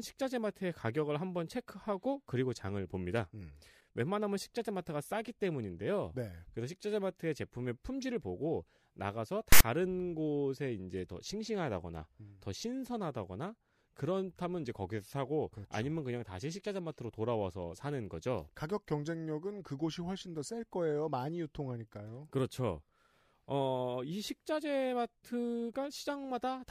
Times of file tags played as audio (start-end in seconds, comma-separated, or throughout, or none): 9.52-9.61